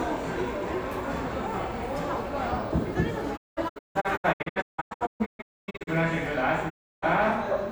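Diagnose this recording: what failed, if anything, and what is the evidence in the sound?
The broadcast reception stage failed: the receiver lost the digital stream or rejected corrupted frames, then muted until clean frames arrived. This is a digital broadcast dropout. From 3.36 to 5.89 s the sound breaks into many short holes, about 1.6 s missing in total, the longest gap 256 ms, each edge softened by a quick 20 ms fade. A second, unbroken hole runs from 6.68 to 7.04 s (320 ms). The missing material never returns.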